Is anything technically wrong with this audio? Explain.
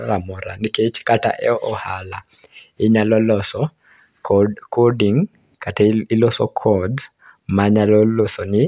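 No, nothing technically wrong can be heard in this speech recording. There is no fault to point to anywhere in the audio.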